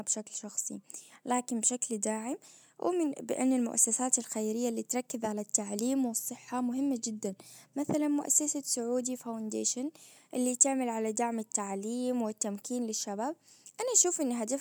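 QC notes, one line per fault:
Nothing to flag here, as the speech runs along with no faults to note.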